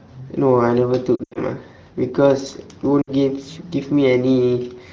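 At about 1.16 to 1.38 s there's a patch of lost AMR speech frames. Radio errors knocked out frames scattered across roughly 200 ms, the longest gap 80 ms, and the wideband decoder papers over each hole by replaying the last good pitch and vocal tract settings while fading the gain. So you hear a smeared, warbly stretch that sags, then rough recovery. A shorter 60 ms dropout at 3.02 to 3.10 s gives a quick dip.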